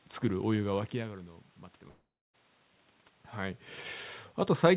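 At 1.88 s the speech dissolves into a fading buzz, then silence until 2.35 s, likely a long network dropout losing nearly half a second.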